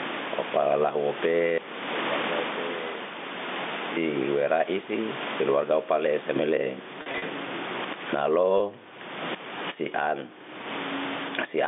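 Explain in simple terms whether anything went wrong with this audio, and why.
Two things went wrong. The first is gain pumping, and it runs through the whole clip. The level swings by a large amount. Loud and quiet passages end up flattened toward the same level, which sounds squashed. The likely cause is a microphone gain set far too high, with a fast limiter or compressor repeatedly pulling it back down.

The second is packet loss with pitch repetition, which happens twice. Between 7.02 and 7.22 s, about 100 ms of audio went missing in several short pieces spread over 200 ms, the longest lasting 40 ms. Each gap was patched by repeating the last tiny cycle of the sound, which gives a brief held, buzzy tone. At 8.58 s a single 20 ms gap was filled the same way, producing a very short buzz. This patching was done by the receiving end, while the telephone line's G.711 coding carries the sound within its usual narrow telephone range.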